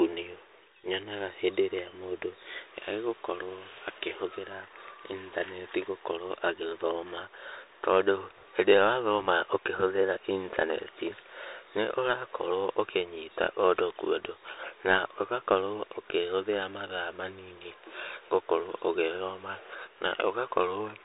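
Throughout, the speech runs through a Bluetooth CVSD headset codec, which codes one-bit adaptive steps and cuts everything above 3.8 kHz, leaving scratchy sibilants over a granular hiss.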